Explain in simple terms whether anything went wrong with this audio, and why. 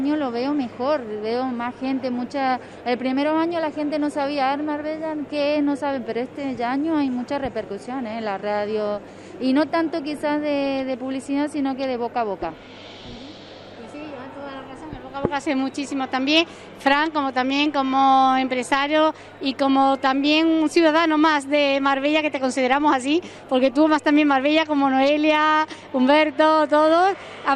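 Yes, something went wrong: a mains hum runs underneath the whole recording, from the first second to the last. It is a steady, low buzz at 50 Hz, the frequency of the electricity supply, and it likely crept in through a ground loop or a nearby transformer. It stays quiet compared with the main sound. Unlike rumble from wind or handling, which wobbles and comes and goes, this tone never changes pitch or loudness.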